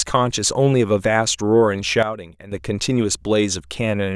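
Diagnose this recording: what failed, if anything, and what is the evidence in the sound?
A sudden gain jump hit the speech at 2.03 s, likely a digital gain change or bit shift in the processing stage applied without a ramp. Speech and background noise drop together by about 12 dB in one step, then snap back at 2.52 s.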